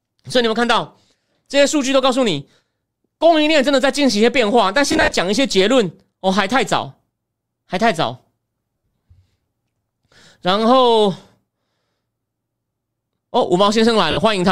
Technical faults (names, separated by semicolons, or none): lost LE Audio frames